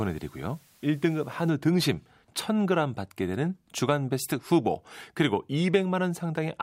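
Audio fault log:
0.0–1.5 s, low bit depth with dither: the speech is held to about 9 bits, with dither added before rounding, so the quantization error becomes a steady, even hiss roughly 30 dB below the signal rather than distortion, and it stops at 1.5 s.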